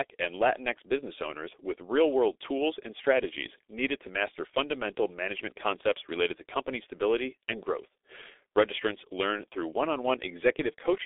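From start to finish the speech carries G.723.1 codec damage, muffled and hoarse with smeared consonants, while a spectrogram shows a band of about 300 Hz to 3.6 kHz and nothing above 3.8 kHz.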